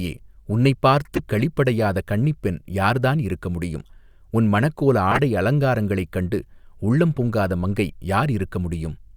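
At 1.14 to 1.20 s, before "களிப்படையாத கன்னிப்பெண் யார் தான்", and 5.11 to 5.19 s, before "அலங்காரங்களைக் கண்டு உள்ளம் பொங்காத", loud bursts from several corrupt frames decoded play as misplaced energy. A faint single-frame blip at 7.16 s falls between "அலங்காரங்களைக் கண்டு உள்ளம்" and "பொங்காத மங்கை". Unlike dropouts, these add spurious sound rather than silence.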